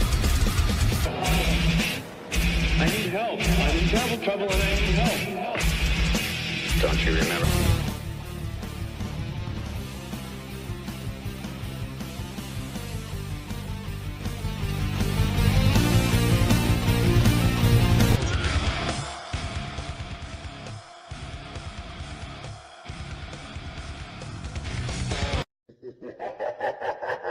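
From 18.77 to 20.22 s, zipper noise ticks through the sound as the level falls by roughly 10 dB in unsmoothed jumps of about 2 dB, around four per second. The waveform envelope becomes a staircase, and each jump shows as a thin vertical click line on a spectrogram. The same zipping returns from 24.15 to 25.43 s as the level climbs back about 10 dB, at around five steps per second.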